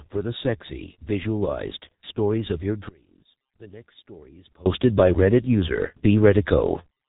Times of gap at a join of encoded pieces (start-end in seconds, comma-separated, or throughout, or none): none